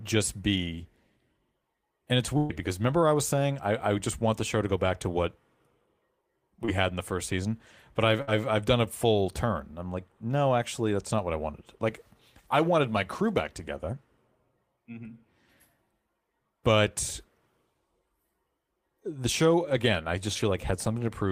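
From 2.37 to 2.51 s, just before "because remember I was", a burst of packet loss left about 120 ms of audio missing. The receiver stretched the last sound over the hole, fading it as it went, so a held, dimming smear replaces the missing stretch. A second, shorter burst at 8.22 to 8.29 s, between "first season but I've" and "I've done a full", drops about 60 ms and fills it the same way. Between them, at 6.65 to 6.70 s before "had in the first", short concealed packet loss lost about 20 ms, and the decoder bridged it by extending the preceding sound, leaving a brief smear before "had".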